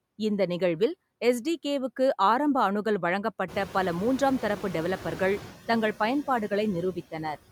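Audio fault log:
Throughout: noise suppressor artifacts. The background noise is pulled down by about 14 dB, but because the suppressor decides band by band and frame by frame what counts as steady noise, the residue never sits still. It dips in the gaps between phrases and swells back underneath the speech. That constant pumping pattern separates it from a simple fixed noise floor.
3.48–5.44 s: noise suppressor catching up. Right after "ஆரம்ப அணுகல்", around 3.5 s, the room noise jumps by roughly 18 dB and settles about 16 dB below the speech. The suppressor's noise estimate is still tuned to the quieter floor, so at first only about 5 dB is removed and the louder noise comes through. Over about 1.96 s the estimate adapts and the noise sinks. The gradual fade is what distinguishes this lag from the ordinary frame-to-frame suppression throughout.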